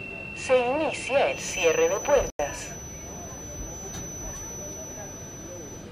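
From 1.28 s to the end, the path from loudspeaker back into the microphone was likely sitting just at the point of feedback. A feedback whistle results: a thin, steady 6 kHz tone riding around 10 dB below the sound, swelling and fading slowly in level without building up.

From 2.29 to 2.39 s, damaged compressed data was rejected by the decoder and replaced with silence, which fits two muted frames. This corrupt frame muting leaves an abrupt hole of about 0.1 s, with the timing after it unchanged.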